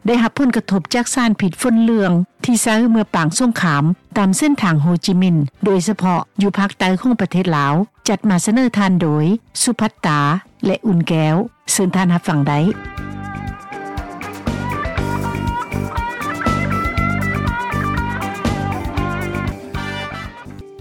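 Nothing here goes wrong: there are no dropouts, glitches or other technical faults anywhere in the recording.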